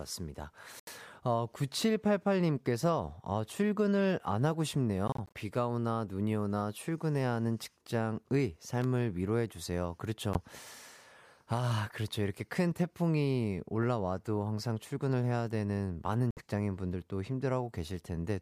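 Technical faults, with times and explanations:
0.80–0.89 s, 5.08–5.38 s, 10.33–10.38 s, 16.31–16.41 s: Bluetooth dropout. The sound cuts to silence, then resumes further on as if it had kept playing. Lost audio totals about 76, 122, 15 and 61 ms. At 5.08 s the gaps are scattered over about 274 ms, the longest about 31 ms. This is likely packets missing their delivery deadline to the headphones.
8.82–8.84 s: loose connector crackle. A 25 ms burst of irregular crackle, heard as the signal being chopped as a worn or dirty contact rapidly makes and breaks. Any DC present on the line would add pops at each break.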